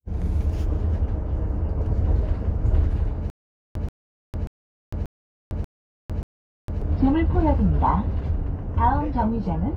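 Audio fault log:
3.3–6.82 s, stutter with silent gaps: playback likely stalled, and on each retry the player re-sent the last fragment it still held before running dry again. A 133 ms burst of the same sound repeats 6 times at an even 586 ms pace, each copy followed by about 453 ms of digital silence. The result is a mechanical, looping judder, and whatever audio belonged to that stretch never plays.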